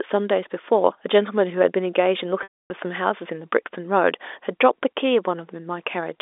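At 2.43 s there's a packet loss with pitch repetition: about 270 ms drops out, the last pitch period repeats, fades to silence, and cross-fades back in at 2.70 s over the narrow telephone band.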